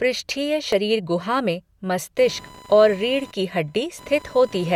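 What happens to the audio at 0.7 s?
At 0.72 s there is an overlap between stream segments, just before "गुहा में". Two adjacent segments of the stream claim the same short stretch of time, so the player discards the apparent duplicate, though that speech was never actually repeated. Roughly 13 ms of the signal drops out and the waveform jumps straight from one point to a later one, which is heard as a brief click or tiny skip in the speech.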